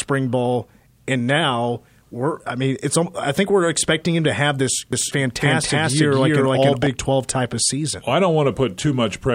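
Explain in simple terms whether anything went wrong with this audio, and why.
A doubled audio track appears from 4.93 to 6.87 s, after "him to have this": an equally loud copy trails about a third of a second behind, likely from a second, slower capture path.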